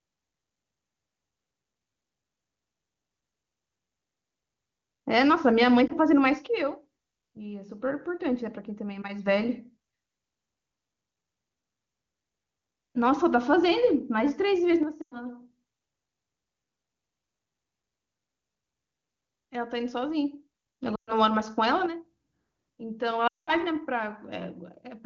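A brief warble at 5.87–5.93 s, then dropouts that quickly fade to near silence at 15.01–15.18, 20.95–21.12 and 23.27–23.51 s: lost AMR speech frames, with the wideband decoder extrapolating the last good frame at falling gain.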